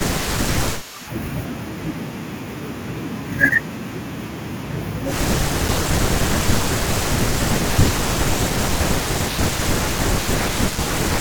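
From 0.0 to 1.1 s the speech dips by about 10 dB, most likely speech suppressed in double talk: an echo canceller, hearing both sides at once, turned down the near talker along with the far end. Overlapping it, from 0.78 to 1.08 s, a faint copy about 25 dB down trails the speech by 198 ms, likely an echo leak, where a loudspeaker's pickup slipped past the canceller and returned; its fixed delay separates it from room reverberation. The same ducking returns at 5.38 to 5.91 s (about 10 dB), 6.17 to 7.06 s, and 7.26 s to the end (both about 15 dB), each likely double-talk suppression, pumping in patches.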